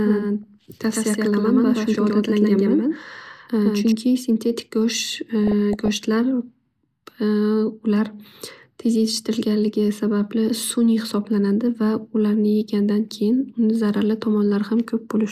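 From the start of the clip to 3.92 s the speech carries a doubled audio track: a second full-band copy, about as loud as the original, trails it by roughly 150 ms. It sounds like a hard, dry echo with no decay or room colour, and it cuts off abruptly at 3.92 s. The likely cause is the same signal reaching the mix twice, once through a slower path. On a waveform every syllable onset appears twice; a spectrogram shows each pattern repeated, shifted a fixed distance to the right.

A brief DAB burbling event occurs at 0.43 s. A longer stretch runs from 5.47 to 6.05 s. Bit errors that get past the error correction corrupt samples and scale factors in the MP2 data, so individual sub-bands jump in level for up to a frame. This produces a burbling over the speech, consistent with an error rate of a few tenths of a percent. On a spectrogram it appears as isolated rectangular bright or dark blocks confined to narrow frequency bands, each lasting up to one frame.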